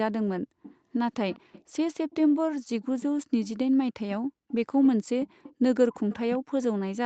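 Echo leak runs through this speech clip at 0.62–0.76, 1.13–1.64, 2.82–3.06, 4.48–4.52, 4.83–4.89, 5.21–5.53 and 5.94–6.39 s. A faint copy of the speech trails the original by about 198 ms, mostly around 20 dB down, dipping to about 25 dB at 4.5 s and rising to about 15 dB near 6 s. The likely cause is a far-end loudspeaker whose echo canceller let some of its microphone pickup return down the line.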